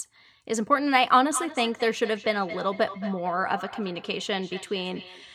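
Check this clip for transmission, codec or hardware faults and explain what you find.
One fault is present: an acoustic loop between two devices on the same call.

Feedback echo between two devices runs from 1.3 s to the end of the clip. A second device in the room plays this microphone's signal aloud, and the microphone picks it up again. Neither echo canceller removes another device's output. The speech returns roughly every fifth of a second, thinner and more ringing, at up to about 13 dB below the direct speech.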